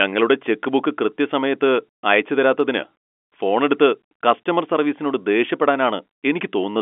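Speech carried over G.711 telephone coding at 64 kbps, with the band held to roughly 250 Hz to 3.4 kHz as expected of a phone line, shows no technical fault.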